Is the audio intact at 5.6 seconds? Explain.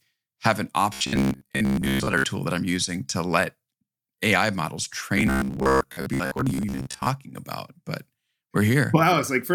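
No. From 5.18 to 7.08 s the speech turns into robotic sound from repeated short buffers, with a rigid 66.8 Hz buzz. The likely cause is audio arriving too seldom, so roughly 15 ms chunks are replayed in place of most of the real signal.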